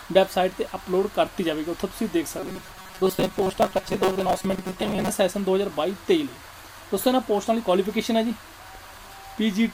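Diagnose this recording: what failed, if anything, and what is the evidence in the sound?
The buffer stage likely ran dry, looping 5.3 ms blocks: from 2.38 to 5.09 s, robotic sound from repeated short buffers leaves a rigid 188 Hz buzz.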